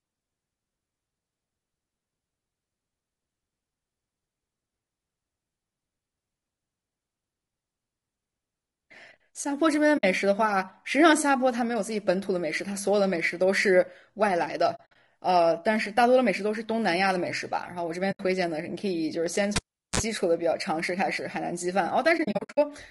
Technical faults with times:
0.00-22.91 low-delay AAC compression
9.97-10.04 AAC frame loss with muting
14.75-14.96 AAC frame loss with muting
18.11-18.20 AAC frame loss with muting
19.56-20.00 cable pulled and plugged in
22.17-22.58 AAC frame loss with muting

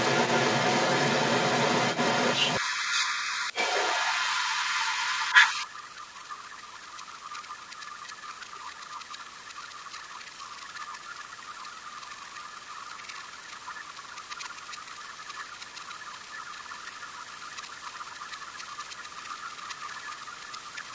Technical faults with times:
0.00-20.94 other side's voice leaking through
2.60-7.63 speech suppressed in double talk
8.21-18.52 speech suppressed in double talk
19.13-20.94 speech suppressed in double talk

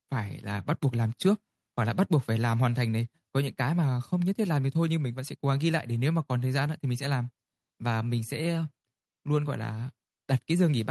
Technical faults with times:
none

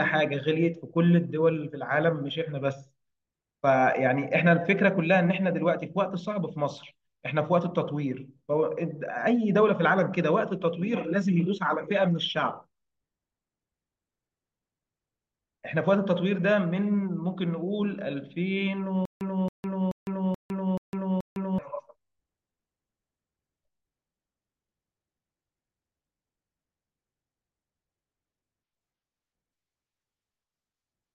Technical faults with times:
19.05-21.58 stutter with silent gaps

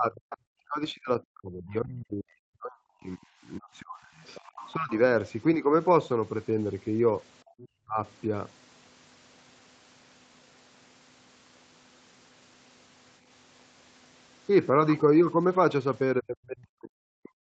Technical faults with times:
0.00-4.13 speech suppressed in double talk
4.16-4.99 other side's voice leaking through
4.75-4.92 speech suppressed in double talk
5.55-5.73 speech suppressed in double talk
7.44-7.57 background gated by the echo canceller
7.58-7.68 other side's voice leaking through
7.85-7.98 speech suppressed in double talk
16.20-17.40 speech suppressed in double talk

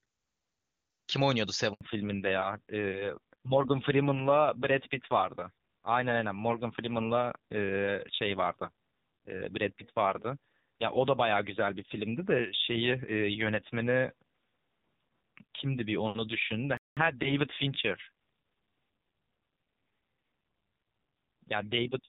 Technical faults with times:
1.73-1.81 handover gap
1.81-22.09 fallback to narrowband
16.77-16.97 playback stall

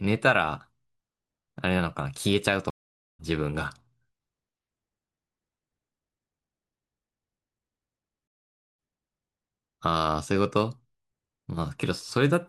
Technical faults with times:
2.70-3.20 stream reconnect
8.27-8.87 stream reconnect

